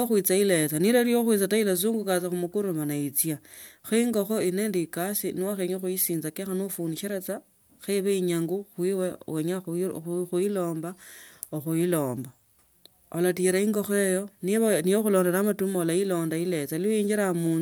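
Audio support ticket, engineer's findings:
Engineer's findings: no fault found in this speech recording.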